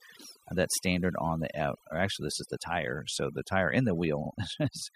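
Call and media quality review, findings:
Overdone noise removal, throughout. Background dropped, breaking up into twinkling specks. Noise reduction stage set too strong: bands near the noise estimate pulled far down or gated, taking quiet speech detail with them.

Repeated frames, 4.25–4.30 s, right after "the tire and". Audible stutter: a 52 ms block plays twice. Encoder/transport re-delivered two compressed frames. Adds about 52 ms to the clip.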